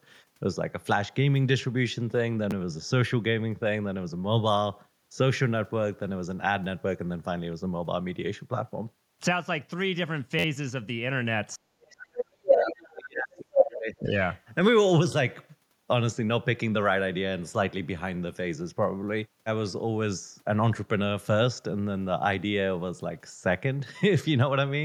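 In this speech recording, from 11.56 to 14.12 s the talker's voice sinks and breaks up for roughly two seconds, dropping at its deepest by about 40 dB. This is speech suppressed in double talk, likely an echo canceller that could not tell the talker from loudspeaker echo while both sides spoke, so it muted both. The other side's voice is leaking through at 11.99–12.04 s (about 20 dB below the speech), 12.46–12.92 s (roughly as loud as the talker) and 14.16–14.41 s (a faint trace about 35 dB down), likely because the echo canceller left part of the loudspeaker playback in the microphone signal.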